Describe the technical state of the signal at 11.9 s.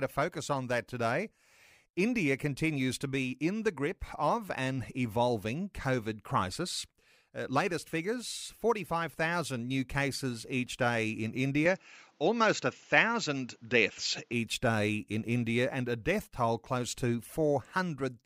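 At 11.9 s the signal sits inside a stretch from 11.66 to 14.33 s, starting just after "cases each day in", where the sound most likely reflects an input switched to a poorer device. The band stops near 7.6 kHz, so the top end goes dull, the level shifts by roughly 5 dB, and a new noise floor appears around 40 dB below the signal. The change happens with no silent gap, and full bandwidth returns at 14.33 s.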